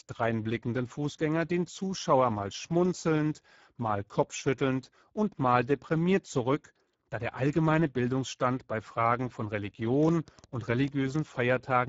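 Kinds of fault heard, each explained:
Speex codec: hoarse, noisy speech with nothing above about 7.7 kHz, from a low-bitrate CELP encoding, which fits roughly 10 kbps, starving the excitation.
Train of clicks: about ten uneven pops near 10.0 to 11.2 s, around 8 per second, likely from interference or a faulty connection injecting pulses.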